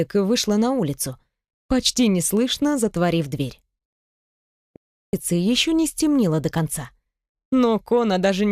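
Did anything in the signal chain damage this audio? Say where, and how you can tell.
Yes. The input link likely failed briefly at capture, such as a disconnect or stray mute, while the recorder kept writing zeros. That audio dropout to silence runs from 4.76 to 5.13 s: the sound cuts off abruptly into silence with no room tone, and about 370 ms of material is lost.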